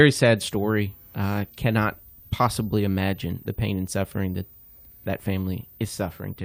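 From 0.37 s to 6.39 s a switching supply whistle sits over the speech: a thin, high tone near 15 kHz, roughly 25 dB below the speech. A switching power supply is running in an audible burst mode or beating with another supply, and leaking its switching frequency into the audio. Unlike a fixed-frequency line whistle, its pitch wanders between about 14.3 kHz and 15.0 kHz as the supply's load shifts, rather than holding one steady frequency.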